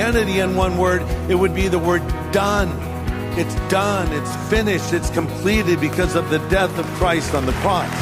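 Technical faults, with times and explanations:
There are no technical faults to list, so no times or explanations apply.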